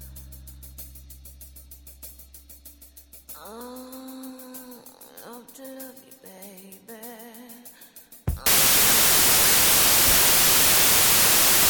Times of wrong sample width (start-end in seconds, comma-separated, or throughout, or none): 8.46-11.70